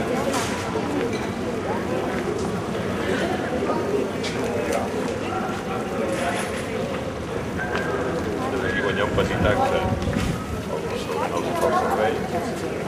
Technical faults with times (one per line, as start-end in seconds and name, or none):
none